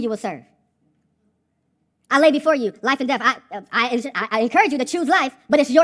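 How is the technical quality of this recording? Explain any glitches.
The recording has a wrong sample rate fault that affects its entire length. From start to finish the speech plays about 1.38 times too fast and sits roughly 5.6 semitones too high, so voices come across as hurried and chipmunk-like. Speed and pitch are shifted by the same ratio, which is the signature of samples clocked out faster than they were captured with no rate conversion. That ratio fits audio recorded at 16 kHz being played back at 22 kHz.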